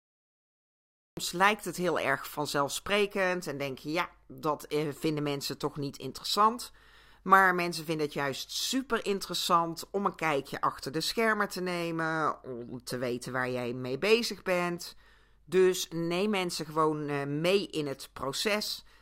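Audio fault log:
0.00–1.17 s: cut-off start. Digital silence until 1.17 s, where the speech begins already mid-sound, with no natural attack, because capture started late.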